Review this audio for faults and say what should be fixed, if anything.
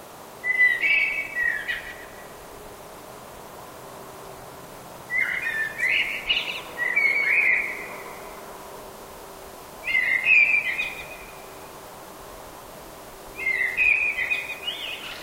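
Damaged data in the compressed stream causes brief glitches at 1.29 s, 5.54 s, 10.58 s and 13.81 s. At each point, corrupted bytes make the decoder misread the affected frames and lose sync until it locates the next valid frame header. To prevent this, re-encode from a clean source and verify file transfers or stream delivery with checksums.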